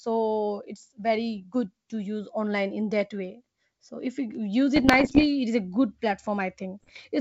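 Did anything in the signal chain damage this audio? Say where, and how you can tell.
Yes, bit errors on an ADPCM link, at the network stage. Rough, popping bursts with brief level jumps run from 4.76 to 5.25 s, ending before "it is", and from 6.81 to 7.01 s. Each flipped bit derails the decoder's step size and predictor, so distortion lingers.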